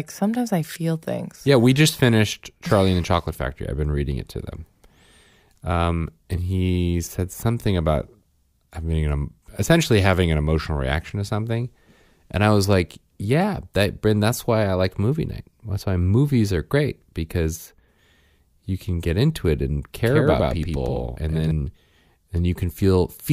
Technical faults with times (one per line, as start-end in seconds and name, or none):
20.05-21.51 doubled audio track